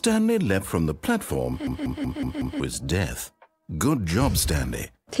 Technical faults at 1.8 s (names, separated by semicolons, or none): system hang loop